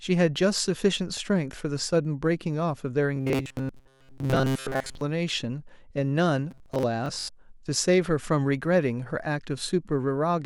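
Speech, with two kinds of fault. From 3.16 to 5.01 s, and again from 6.51 to 6.83 s, the audio turns into robotic sound from repeated short buffers. The voice becomes a rigid, metallic buzz at 133 Hz that only loosely tracks the speech. That pitch matches a slice of about 7.5 ms played over and over. The likely cause is fresh audio arriving too rarely, so most of the real signal is skipped while the last slice repeats. Then, from 7.06 to 7.29 s, there is a Bluetooth stutter. Packets went missing, and the receiver replayed its last buffer until new data came. The gaps add up to about 128 ms spread across roughly 213 ms, which points to around six lost packets. The longest run lasts 85 ms and sounds like a machine-gun buzz. Afterwards the speech picks up further on, as if it had kept playing.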